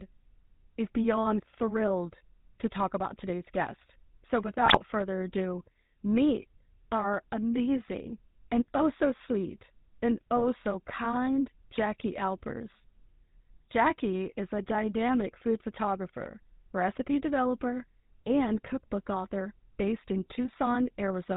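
It's a speech clip run through the GSM full-rate codec the whole way, with plainly audible codec damage: nothing above 4 kHz and that buzzy, gravelly texture from the pulse-driven vocal-tract model. On top of that there are two bursts of GSM bit errors, where corrupted filter, pitch or gain values garble the decoded sound. The first runs from 4.66 to 4.81 s, just before "further ado meet our". The second runs from 10.37 to 10.45 s, between "oh so sweet and" and "so kind".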